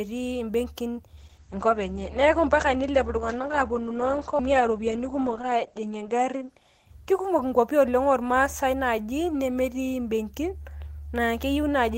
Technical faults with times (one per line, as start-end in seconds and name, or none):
1.19-8.47 call bitrate drop